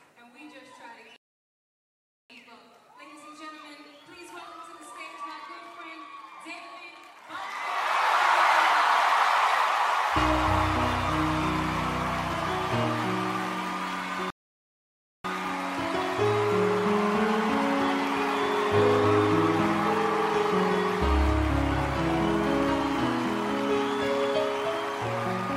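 Rebuffering stalls occur twice, from 1.16 to 2.30 s and from 14.30 to 15.25 s. Each time the player exhausted its downloaded audio and halted until more data arrived. The sound drops abruptly to silence, then picks up exactly where it left off, with nothing skipped. The gaps add about 1.14 s and 0.94 s respectively, stretching the playback timeline rather than removing any material.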